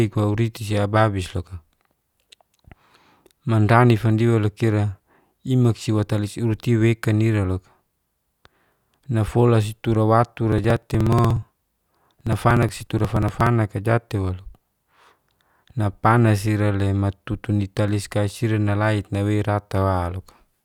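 A speech recording in which, from 10.52 s to 13.47 s, a rapid, evenly spaced ticking rides on the voice, some fifty small clicks arriving every 60 ms, roughly seventeen per second, and audible only while sound is present. These are periodic USB or driver dropouts: something stalled the audio path at a fixed interval, and each time a few milliseconds of signal were skipped outright, so the waveform jumps and clicks at every gap.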